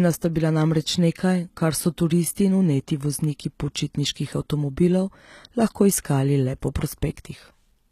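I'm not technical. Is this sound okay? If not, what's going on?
No. Throughout the speech the s sounds come out gritty and metallic, with nothing above about 14.9 kHz. That points to likely HE-AAC compression: the treble is rebuilt from lower sounds rather than simply cut off, so it stays bright but sounds false.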